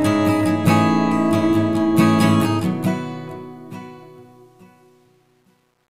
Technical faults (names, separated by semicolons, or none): truncation distortion on a fade